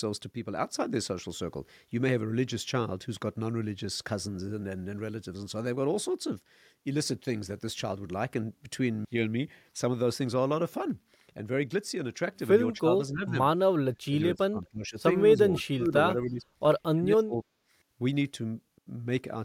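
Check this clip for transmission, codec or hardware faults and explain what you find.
One fault recurs in the second half of the speech: speech suppressed in double talk, at 12.79–13.35, 14.07–14.96, 15.35–15.94, 16.15–16.44 and 16.94–17.46 s. In each stretch the voice sags or breaks into pieces, sinking by about 10 dB at the mildest and about 30 dB at the deepest. The likely cause is an echo canceller that, with both ends talking, can't tell this talker from returning loudspeaker echo and attenuates everything together.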